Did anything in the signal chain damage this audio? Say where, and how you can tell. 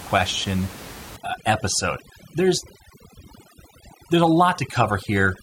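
Yes. At the call-processing stage, overdone noise removal sets its suppression far too aggressively from 1.16 s to the end, muting individual frequency bands that sit near its noise estimate. The room noise, about 18 dB below the speech, drops and breaks up into twinkling specks, and the voice's quieter components are stripped away.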